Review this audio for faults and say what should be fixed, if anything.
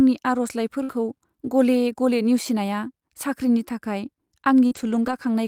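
From 0.83 to 0.91 s there is a burst of packet loss. The receiver extended the last speech for about 53 ms and faded it, then resumed with roughly 60 ms of audio missing, so the sound jumps ahead after a held buzz or hiss. A larger jitter buffer and more robust transport would prevent it.

A lost packet rebuilt from error correction follows immediately, 0.91 to 0.93 s, covering 20 ms. A second, longer stretch runs from 4.71 to 5.13 s, about 220 ms. In both, the decoder played low-bitrate redundant copies, so nothing drops out, but those frames sound rougher and noisier. Reducing network loss, or raising the bitrate budget for the redundant data, would prevent it.

A short concealed packet loss at 4.67 to 4.73 s replaced about 40 ms of missing audio with roughly 41 ms of extrapolated sound, heard as a brief smear or wobble just as the rebuilt stretch begins, with a short sound possibly swallowed. 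Better network stability and more error-correction coverage would prevent it.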